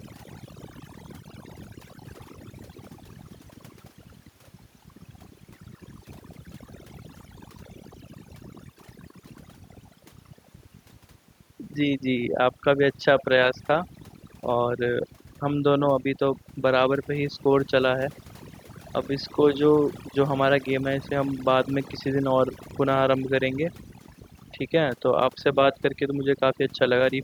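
A speech recording with overdone noise removal from start to finish. The noise reduction was set so aggressively that individual frequency bands near the noise estimate are pulled almost to nothing, and the quieter parts of the voice are removed along with the noise. The background drops and breaks up into twinkling specks. On a spectrogram, the gaps between phrases show as an almost empty floor dotted with isolated bright pixels, and the voice's weaker harmonics and breathy upper bands look patchy and eaten away. There are also two small jumps in the sound, at 19.02 s and 22.71 s. No gap of silence comes with either one. The audio simply skips forward, by a few milliseconds at the first and around 15 ms at the second. The likely cause is a dropped buffer (overrun), where the recording software fell behind, the hardware overwrote a block of samples, and the two sides of the missing block were joined directly. 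In the waveform, each shows as a sudden discontinuity, a step where the wave shape breaks without any flat section. On a spectrogram, it appears as a thin vertical broadband line.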